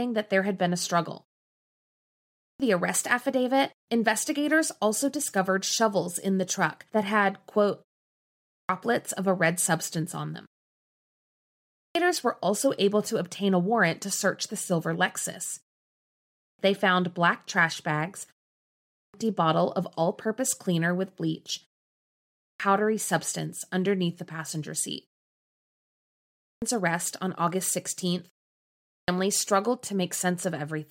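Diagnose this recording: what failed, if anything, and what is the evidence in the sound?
Clipped start after a pause, at 2.03, 8.14, 11.39, 15.97, 18.55, 21.95, 25.96 and 28.54 s: after gaps of 0.3 to 1 s, speech begins abruptly with its first 0.54 to 0.66 s missing. The playback device sleeps in silence and wakes too late.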